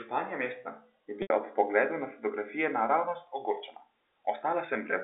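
At 1.22 s, packet loss with pitch repetition bridges an 80 ms gap with one repeated pitch period that decays to silence. On the waveform this shows as identical cycles shrinking toward zero, and on the spectrogram as frozen harmonics narrowed to the telephone band. The sound resumes at 1.30 s.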